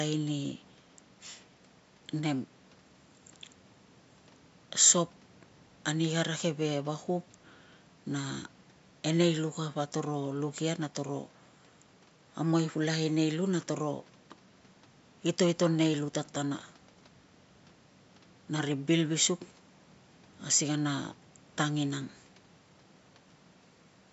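The speech comes through with no technical faults, and only the room's own background noise sits beneath it, about 35 dB below the speech.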